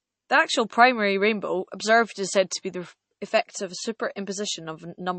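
A short stretch of speech carries MP3 compression damage from start to finish, and it's plainly audible. The treble stops dead at about 8.3 kHz, which fits the encoder cutting the top band to save bits. The low-level detail has that watery, swirly quality, where weak frequency lines flicker in and out between frames. All of that points to a low bitrate, something around 32 kbps, as the likely cause.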